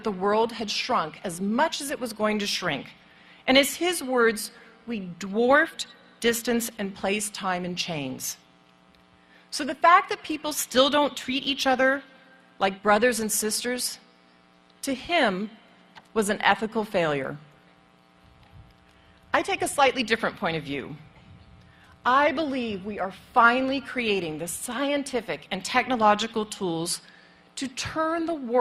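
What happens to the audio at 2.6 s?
Nothing goes wrong at 2.6 s; the audio plays through that moment intact, with no dropout, click or distortion.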